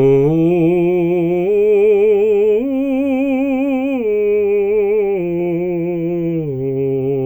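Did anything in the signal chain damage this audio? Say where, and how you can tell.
No, no signal-chain damage.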